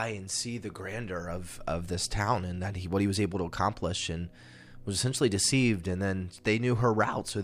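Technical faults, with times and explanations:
No technical faults are audible in this speech recording.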